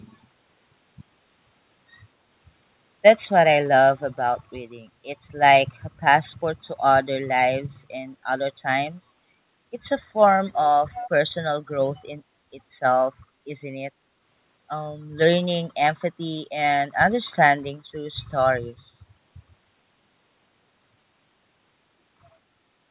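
At 10.92 s a faint second copy of the speech appears, trailing the original by 240 ms. It sits well below the main speech, roughly 15 dB down. It stops at 11.10 s. This is an echo leak. The likely cause is a far end playing the call on a loudspeaker. Its echo canceller missed part of what its microphone caught, and that scrap was sent back. The call audio carries nothing above 4 kHz.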